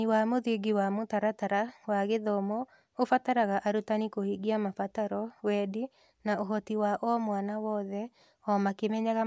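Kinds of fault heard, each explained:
No technical faults can be heard anywhere in the speech recording, so there is nothing to list.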